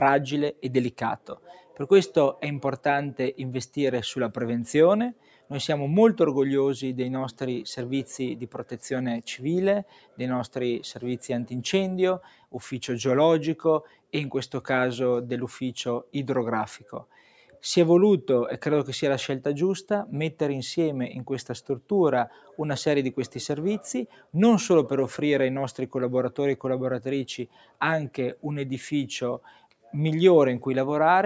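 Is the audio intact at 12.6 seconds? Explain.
No. Between 12.21 and 14.12 s, sound is cut by the noise suppressor, which treats sustained parts as noise and pulls them down by up to about 12 dB. Tails drop away abruptly, visible as sudden dips in the waveform envelope. Across the whole clip, a speech noise suppressor is applied to non-speech sound, making levels swing by roughly 10 dB. Held tones pump and thin, and the spectrogram shows fading, patchy sustained bands.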